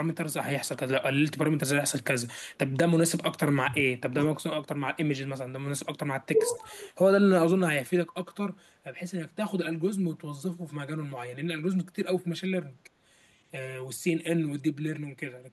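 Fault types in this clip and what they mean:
speech suppressed in double talk: at 3.64, 4.12, 4.4 and 6.48 s the speech dips in level, by about 15, 10, 25 and 5 dB, deepest from 4.4 to 4.81 s. This is likely an echo canceller turning down the near talker while the far side spoke too.
echo leak: at 6.42 s a brief, faint scrap of delayed sound slips through, arriving 382 ms late and about 30 dB below the speech. This is likely loudspeaker output reaching the microphone and not being fully removed by the echo canceller.
channel delay (comb filtering): from 7.84 s to the end the sound turns hollow and phasey. One channel runs around 5 ms behind the other, so the mono sum cancels at evenly spaced frequencies, with the first notch near 100 Hz.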